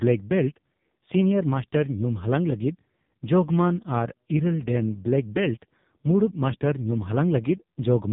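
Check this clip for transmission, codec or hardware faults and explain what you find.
One fault runs through the whole clip: AMR narrowband mobile codec damage. The speech stops sharply at about 3.8 kHz. The codec rebuilds each 20 ms frame from a vocal-tract model and a few pulses. Heavy damage makes it buzzy and synthetic, which points to roughly 5 kbps.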